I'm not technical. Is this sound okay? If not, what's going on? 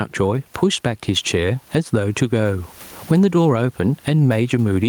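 No. All the way through, the level swings strongly as the gain is pulled down on each loud sound, squashing loud and soft parts closer together; this is called gain pumping. It's likely a microphone set far too loud with an automatic limiter clamping down. Ordinary room noise is also there, well below the speech, and that part is normal.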